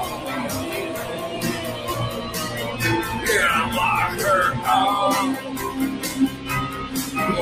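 From the top, you can hear a speech-oriented noise suppressor applied to music or sounds running across the whole clip. It treats anything steady, like held tones, ambience or a decaying tail, as noise to be removed, while sharp onsets mostly get through. That gain riding swings by something like 10 dB, so the level pumps and the sound keeps thinning out and then recovering instead of sitting still.

There are also four moments where the sound is cut by the noise suppressor harder than the surrounding material. The first is 0.11 to 0.26 s, dipping by about 5 dB. The second and longest is 0.92 to 1.37 s, close to half a second, also down about 5 dB. The third is 1.72 to 1.87 s, down about 4 dB. The last is 6.31 to 6.47 s, down about 5 dB. In each case the steadier part of the sound sinks or its decay gets clipped short.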